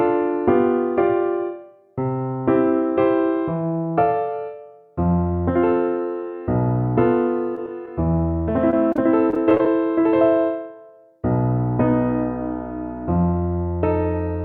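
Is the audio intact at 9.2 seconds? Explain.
No, 9.2 s falls inside a burst of repeated packet loss running from about 8.70 to 9.66 s. Over that second, the stream keeps dropping short chunks, which fits around nine lost or late packets, none longer than 28 ms. Each hole gets papered over by stretching the last bit of sound, roughly 140 ms in total, about 15% of the span. So right there it sounds choppy and robotic, with bits missing.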